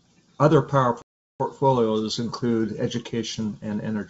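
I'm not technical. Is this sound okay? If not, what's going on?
No. There is packet loss on an ADPCM call from about 1.02 to 1.45 seconds. Part of the speech vanishes and is replaced by abrupt silence, a gap of about 380 ms that fits a run of roughly twenty lost packets. The phone system predicts each sound from the ones before it, so the receiving end loses track. When the speech returns, it comes back with slight distortion, then settles within a few hundredths of a second. The G.722 wideband telephone coding is clear and bright.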